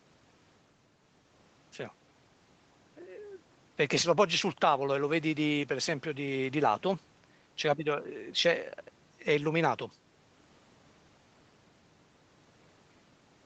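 No technical faults can be heard in this speech clip. It has passed through call microphone processing and a WebRTC call path, and the sound stops at about 8 kHz, which fits an Opus codec running in wideband mode.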